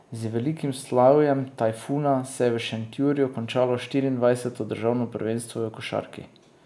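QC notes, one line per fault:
No technical faults are present in this speech recording, and the signal runs without interruption.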